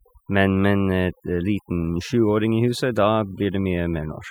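A speech recording with overdone noise removal throughout. The reduction was set so aggressively that frequency bands near the estimated noise floor are pulled almost to nothing, leaving a near-silent background dotted with twinkling specks and taking the quieter parts of the voice with it.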